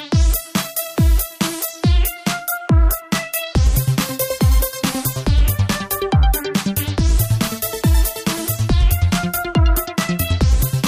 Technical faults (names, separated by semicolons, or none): none